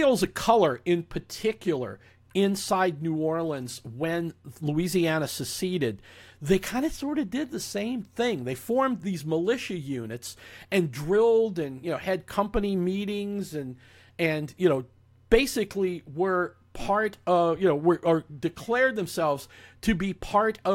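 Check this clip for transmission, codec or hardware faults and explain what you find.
Nothing in the speech points to a transmission, codec or hardware fault.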